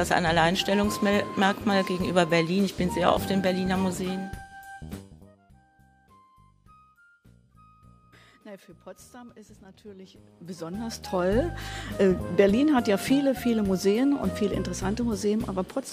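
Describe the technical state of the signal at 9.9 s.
At 9.9 s the audio is intact, with no dropout, distortion or other fault, and any gradual level movement there is an ordinary fader-like change rather than a defect.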